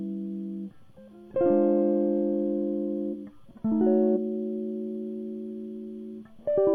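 At 4.12 to 4.18 s the music briefly breaks up from damaged data in a compressed stream: corrupted bytes make the decoder misread frames and hunt for the next valid header.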